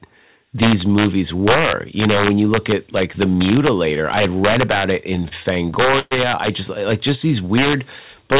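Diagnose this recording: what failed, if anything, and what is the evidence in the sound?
Integer overflow in sample-format conversion: loud speech peaks crack violently throughout, because gain pushed about 5 dB past full scale and a few samples wrapped sign.

Repeated stalls (stutter) from 5.16 to 6.13 s, after "had read about it": the jitter buffer ran dry eleven times, stretching sound up to 118 ms, nothing lost.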